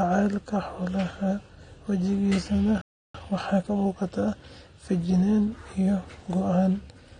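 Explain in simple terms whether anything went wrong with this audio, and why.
Three things went wrong.

The first affects the whole recording and was likely caused by AAC compression. To save space, the encoder dropped the detail it judged least important. The highest frequencies were cut away, and the rest was stored coarsely. As a result, the speech sounds dull and smeared throughout. The crisp edges of sounds like s and f turn fizzy or watery, and the overall tone lacks air and sparkle.

The second is a playback stall. From 2.81 to 3.14 s, the player likely ran short of incoming data or was held up internally, so it had nothing to send to the speakers. The speech simply stops for about a third of a second, a clear hole in the middle of the flow.

The third is time-compressed catch-up. Having fallen behind during that pause, the player made up the lost time by trimming out tiny slices of audio and blending the joins. 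From 3.14 to 4.44 s the speech runs at 1.25 times normal speed. The pitch stays the same, so it sounds hurried rather than squeaky.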